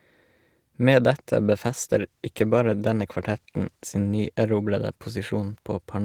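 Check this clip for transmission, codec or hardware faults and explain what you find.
One fault, a call bitrate drop starting at 1.19 s and lasting to the end. The encoder was forced to far fewer bits, consistent with a fall from about 48 to 18 kbps, so the speech is coded more coarsely and loses its high frequencies, sounding rough and muffled.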